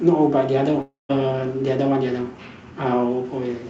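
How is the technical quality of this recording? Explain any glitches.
The speech has one clear glitch, heard against the slightly dulled top end of a call codec that stops around 8 kHz.

From 0.81 to 1.11 s there was likely a long network dropout: about 280 ms of audio never reached the receiver. It stretched the last sound into a fading buzz, then left roughly 160 ms of near-silence before speech resumed with that stretch missing.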